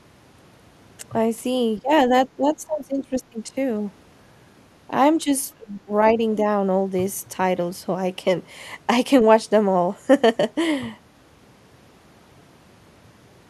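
The speech dips sharply at 1.78–1.92 s, again for most of 2.08–3.38 s, briefly at 5.24 s, and at 5.54–5.91 s, falling by roughly 20 dB at worst and nearer 25 dB in the last dip. This is likely speech suppressed in double talk: an echo canceller mistook the talker for loudspeaker echo and attenuated it. Unlike packet loss, the level is pulled down rather than cut to silence or glitched.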